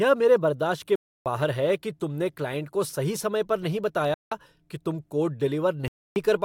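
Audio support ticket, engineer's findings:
Bluetooth stall, 0.96 to 1.26 s, after "मेरे बर्दाश्त के": 0.30 s dead silence, then the speech resumes. Same dropout at 4.14 to 4.32 s, 0.17 s, between "सही समय पर नहीं" and "कि तुम". Third at 5.88 to 6.16 s, 0.28 s. Likely wireless link: interference delays packets, the headphone buffer empties and playback halts until the resent audio arrives.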